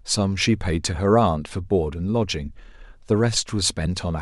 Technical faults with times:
none

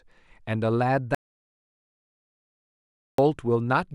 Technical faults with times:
1.15-3.18 audio dropout to silence

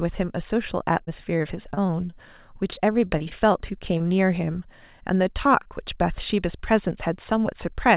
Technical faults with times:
0.98-2.18 repeated packet loss (robotic sound)
2.70-3.56 repeated packet loss (robotic sound)
3.98-4.02 short stall from a late packet
5.63-5.67 short concealed packet loss

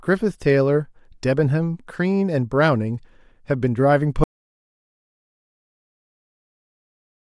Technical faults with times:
4.24-7.36 audio dropout to silence

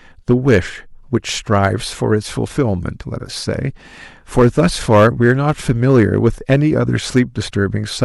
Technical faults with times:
0.31-0.57 hard clipping
1.15 hard clipping
1.53-1.67 hard clipping
2.96-3.02 compressed frames skipped
4.38-6.56 hard clipping
7.16-7.20 hard clipping
7.47-7.51 compressed frames skipped

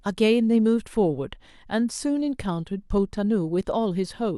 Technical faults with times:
none

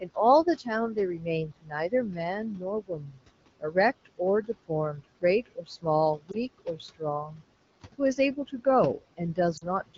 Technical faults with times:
0.00-9.98 noise suppressor artifacts
0.01-2.19 speech cut by the noise suppressor
2.52-3.22 speech cut by the noise suppressor
6.18-7.42 speech cut by the noise suppressor
6.31-6.37 lost AMR speech frames
8.97-9.98 speech cut by the noise suppressor
9.57-9.65 lost AMR speech frames

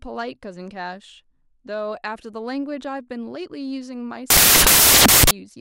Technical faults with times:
4.30-5.31 samples built from the wrong bytes

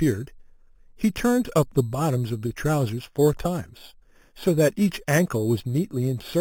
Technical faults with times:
0.00-6.41 imaging from sample-and-hold upsampling

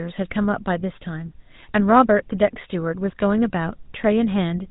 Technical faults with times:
0.00-4.71 GSM full-rate codec

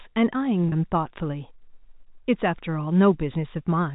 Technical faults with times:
0.69-0.72 packet loss with pitch repetition

